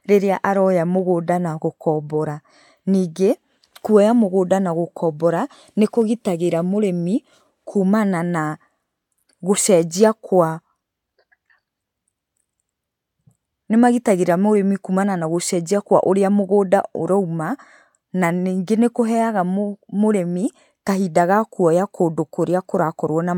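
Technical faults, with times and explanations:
No technical faults can be heard in this speech clip. Nothing in the audio calls for a time or an explanation.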